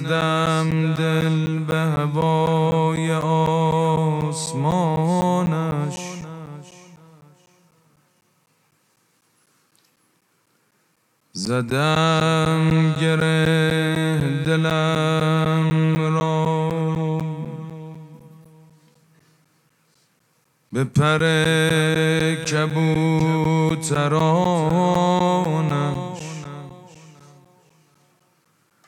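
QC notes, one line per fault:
0.21–28.71 s, periodic USB or driver dropouts: the USB bus or audio driver stalls every 0.25 s, each time replacing roughly 10 ms of audio with silence. The result is about a hundred evenly spaced ticks, four per second, audible wherever signal is present.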